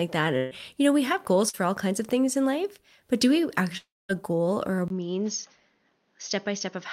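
From 0.37 to 0.53 s, just before "you know we have", a burst of packet loss removes about 140 ms; the last sound is stretched and fades, longer than a mere smear.

At 1.49 to 1.55 s, between "know we have goals" and "all kinds of things", short concealed packet loss covers about 40 ms with a brief smear.

From 3.77 to 4.11 s the last sound continues and fades, then drops to silence for about 210 ms before resuming, with roughly 320 ms gone, likely a long network dropout rather than a brief burst.

From 4.88 s to the end, after "a goal or a", a 20 ms silence is followed by audio about 5 dB quieter with nothing above 6.6 kHz and new noise about 45 dB below. This sustained change of tone, likely an input switched to a poorer device, continues instead of recovering like a packet gap.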